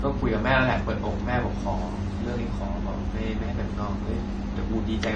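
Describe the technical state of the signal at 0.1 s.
At 0.1 s we're in speech that runs dull above 9 kHz for the whole clip, with two flavours of coding smear stacked together. That's likely transcoding between lossy codecs: a low-bitrate AAC-style pass, then a WMA one re-encoding those artefacts.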